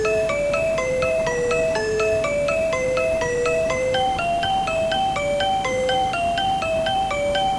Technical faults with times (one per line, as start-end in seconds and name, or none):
none